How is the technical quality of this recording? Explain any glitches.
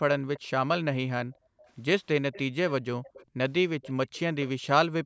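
The recording has two kinds of glitch, both from an echo canceller on a speakerphone call.

Echo leak appears at 0.35 to 0.40 s, 1.32 to 1.70 s, 2.32 to 2.72 s, 3.03 to 3.26 s and 3.82 to 4.48 s. A faint, delayed copy of the speech trails it by about 355 ms each time. It sits roughly 20 to 30 dB below the main speech. The likely cause is a loudspeaker at one end whose output reached the microphone. The canceller failed to remove all of it, so it came back down the line.

Background gated by the echo canceller occurs twice. From 1.31 to 1.59 s the room sound is cut for about a fifth of a second, dropping by up to about 40 dB. From 3.26 to 3.37 s it dips again, briefly, by up to about 28 dB. The canceller turned the microphone down hard while it heard loudspeaker output. The background then returned when it released. The audio also has nothing above 8 kHz, which fits normal call microphone processing.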